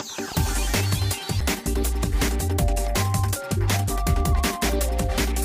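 CD skip at 1.41 s: the laser jumped to another turn of the spiral, so playback mutes for a few milliseconds with a tick and resumes elsewhere.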